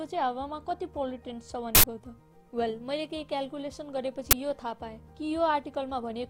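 An uninitialised buffer fault strikes twice, from 1.75 to 1.84 s and from 4.31 to 4.33 s, each a short, loud crack or burst of harsh digital noise cutting through the audio. The playback chain sent out a block before any sound had been written into it, so stale memory contents were read as samples. The first burst lasts about 85 ms, which fits a 4096-sample buffer; the second lasts about 21 ms, which fits a 1024-sample buffer.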